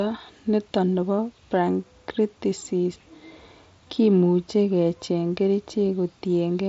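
No technical faults are present.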